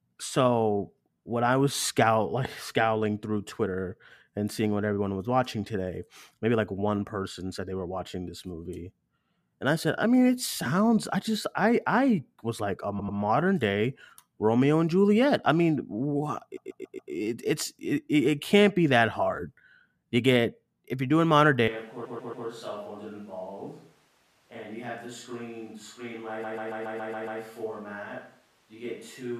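Repeated frames, at 12.98 to 13.17 s, 16.56 to 17.12 s, 22.04 to 22.46 s and 26.43 to 27.40 s, make this speech stutter. A short block of compressed audio, about 93 ms in the first and 139 ms in the others, is decoded again and again, from two extra plays up to seven in the last. Together they lengthen the audio by roughly 2.1 s. A switch to a distant microphone at 21.68 s lasts to the end. The speech turns suddenly hollow and roomy, drops by about 10 dB, and loses low end, with background noise only around 25 dB below it. That is likely because the close microphone dropped out and a farther one took over.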